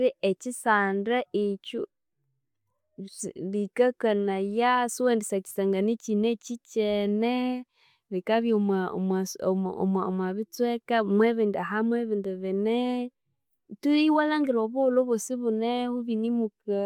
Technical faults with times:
none

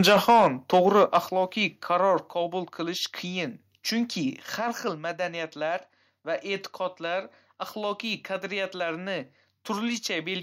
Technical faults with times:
0.00-0.47 microphone overload
0.30 microphone volume stepped down
0.73-1.18 microphone overload
1.29 microphone volume stepped down
2.31 microphone volume stepped down

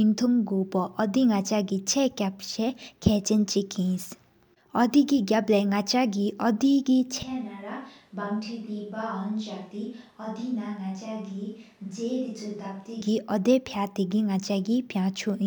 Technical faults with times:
7.23-13.01 switch to a distant microphone

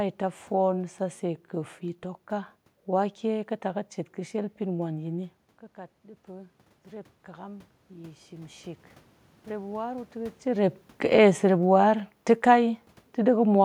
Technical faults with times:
6.02-8.66 automatic gain rising
10.49-13.60 automatic gain falling

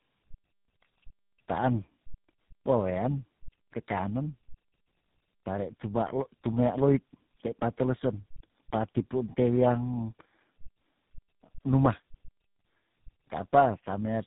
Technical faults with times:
0.00-14.26 tandem speech coding

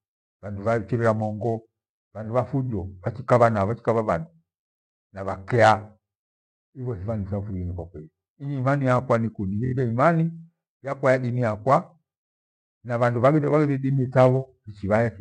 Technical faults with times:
9.65-9.72 repeated frames

